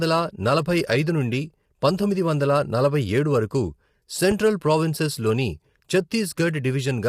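A speech recording that has likely passed through low-delay AAC compression, the AAC-ELD codec used for video calls, at a rate that sounds like about 32 kbps. Its short frames separate pitch harmonics poorly, so the voice is plainly rough and grainy, with noise filling the gaps between harmonics and a thin, synthetic-sounding top band. From 4.31 to 4.34 s a single loud pop sits on top of the speech, which carries on underneath and peaks a few dB above it. The pop was likely caused by a sudden voltage pulse from a plug, switch, static discharge or driver glitch entering the signal path.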